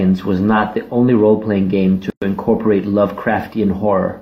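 At 2.10 s, just after "game to", the speech drops out. This is a gap at a join of encoded pieces. It lasts about 117 ms and ends at 2.22 s. The audio was encoded in separate segments, and the join was never trimmed. The encoder's start-up delay and the padding of the previous segment's last frame both survive as silence. The codec smears the edges of the gap. The speech then resumes exactly where it stopped.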